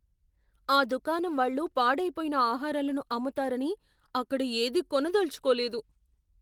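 No technical faults can be heard in the speech, which carries the light coding character of Opus in its hybrid voice mode, consistent with a rate around 20 kbps, and keeps a full band extending to about 20.2 kHz.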